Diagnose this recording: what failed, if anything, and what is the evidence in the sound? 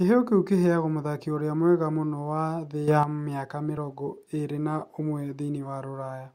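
From 2.88 to 3.03 s the speech and its background noise leap together by about 8 dB, then drop back, with no ramp at either edge: a sudden gain jump. This likely comes from a gain setting applied instantly in the driver or call-processing stage, switched in and then out.

At 3.77 s there is a tiny skip where a few milliseconds of speech go missing and the waveform steps abruptly. This is an overlap between stream segments, consistent with 2-second segments whose timestamps overlap, so playback trimmed sound that was never duplicated.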